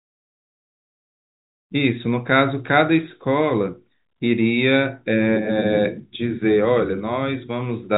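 Nothing stood out on listening to this telephone-band speech, which carries nothing above about 3.8 kHz and fades in smoothly from around 1.5 s to 1.73 s.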